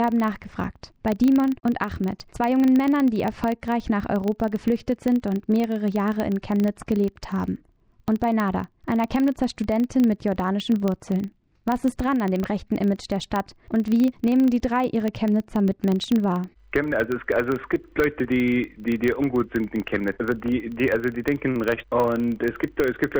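Throughout, a filter restarted on every block produces a 25 Hz buzz from start-up ticks every 40 ms; unlike mains hum, it follows the signal's level.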